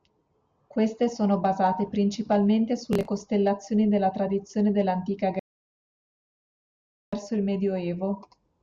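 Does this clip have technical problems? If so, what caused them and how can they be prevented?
Yes. Right after "costellazioni della tradizione dell'antica" the speech cuts to silence at 5.39 s, stays silent for 1.73 s, and returns at 7.14 s about two seconds further along, so a stretch is skipped. This is a stream reconnect: the connection dropped, the player reconnected, and it started a fresh decoder at the stream's current live point rather than where playback had stopped. To prevent it, use a larger client buffer and a reconnect that resumes from the last received position.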